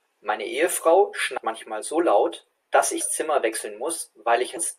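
At 1.37 s, 3.00 s and 4.56 s, compressed frames are skipped: the speech jumps forward by about 200, 150 and 300 ms, in steps that fit a 24 ms frame.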